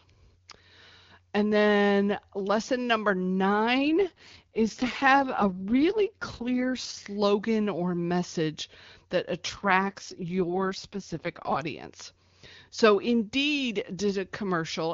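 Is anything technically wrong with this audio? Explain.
Yes. Two AMR rate drops occur, from 3.79 to 7.06 s and from 9.49 to 11.62 s, the second just after "or message that". During each one, the network forces the AMR-WB speech codec down from its high rate to its lowest tier, which fits a fall from 23.85 to 6.6 kbit/s. With far fewer bits for describing the voice, the speech turns rough, raspy and synthetic while the bandwidth stays the same and nothing drops out. Clarity returns as soon as the higher rate is restored.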